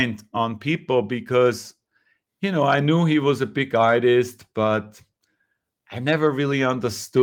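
No technical faults occur at any point in the recording, so there is nothing to describe in time order.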